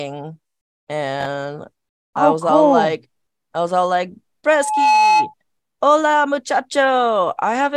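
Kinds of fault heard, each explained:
Loudspeaker feedback squeal: from 4.47 to 5.34 s, a mic re-amplifying its own speaker lets an 857 Hz tone swell within roughly half a second, ending about 5 dB above the speech.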